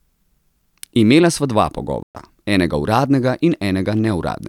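At 2.03 s the speech cuts out abruptly and the output stays silent until 2.15 s, a gap of 120 ms, before the audio comes back. This is a playback stall. The break lands mid-flow rather than at a natural pause, so it registers as a hiccup in the delivery, not a breath. The likely cause is the player running short of buffered data, or its output thread being held up, so nothing reached the device for that interval.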